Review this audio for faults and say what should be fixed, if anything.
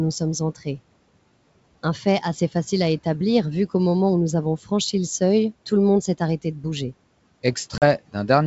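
Speech cut by the noise suppressor at 0.55 to 0.67 s: the suppressor mistook part of the speech for noise and pulled it down by about 11 dB for around a tenth of a second. Unlike a dropout, the sound stays faintly audible rather than falling to silence. Gentler suppression with a speech-aware detector would prevent it.

Packet loss on an ADPCM call at 7.78 to 7.84 s: a 40 ms hard-edged hole, which suggests about two lost packets. Afterwards the speech returns slightly distorted until the decoder's predictor and step size fall back into step with the sender's. The abrupt gap and disturbed recovery distinguish it from suppressor attenuation. Loss concealment that also resets the decoder state would prevent it.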